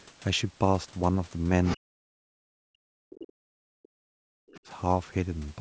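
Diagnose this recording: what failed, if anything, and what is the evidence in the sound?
In the driver or buffer stage, there is a block size mismatch (truncated): one stage writes longer blocks than the next reads, so each block's tail is discarded. A steady 23.5 Hz buzz runs throughout, which fits 1024-sample blocks. Speed and pitch stay essentially normal.

In call processing, the other side's voice is leaking through. Brief scraps of a second voice appear at 1.65–1.77 s, 3.16–3.31 s and 4.49–4.58 s, at roughly 10, 20 and 30 dB below the talker. The likely cause is loudspeaker echo that the echo canceller left behind.

Also in call processing, the speech is suppressed in double talk. The talker's voice falls away, by as much as around 40 dB, over 1.77–2.7 s, 2.87–3.19 s and 3.36–4.68 s. The likely cause is the echo canceller ducking everything while both sides spoke at once.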